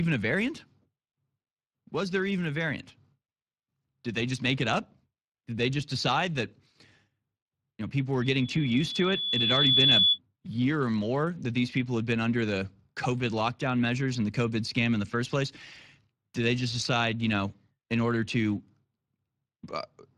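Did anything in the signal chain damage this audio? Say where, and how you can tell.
Yes. The codec stage damaged it throughout. The speech has a hoarse, noisy grain, and the codec damage is plainly audible. This is Speex. Its CELP coder has too few bits to model the excitation cleanly, which fits a mid-rate setting around 22 kbps.

The playback-to-microphone path failed from 8.22 to 10.19 s, after "you know people were" and before "year or more that". This is a loudspeaker feedback squeal. A single 3.4 kHz tone swells over about one and a half seconds to roughly 10 dB above the speech. There, the loop gain exceeded one.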